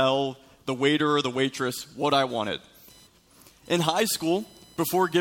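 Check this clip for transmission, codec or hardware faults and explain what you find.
There is one hardware fault, computer activity noise. From 2.30 s to the end, a faint whine pulsing around 1 kHz sits about 30 dB below the sound. Processor or peripheral load is disturbing the shared audio ground.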